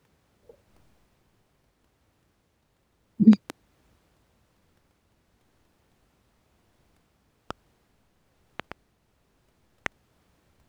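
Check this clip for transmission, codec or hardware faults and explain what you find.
Four loud pops are present in the speech: double pops at 3.33–3.52 s and 8.60–8.74 s, single pops at 7.51–7.53 s and 9.86–9.88 s, peaking about 15 to 25 dB above the speech. A sudden voltage step, likely from a plug, switch or static, becomes a sharp thump. Unlike a dropout, the speech continues uninterrupted beneath it.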